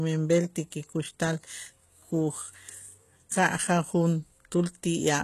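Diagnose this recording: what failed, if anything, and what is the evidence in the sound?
HE-AAC compression throughout, in the codec: treble rebuilt from copied lower bands makes s sounds gritty and lispy and stops at 12.3 kHz, likely from a low bitrate.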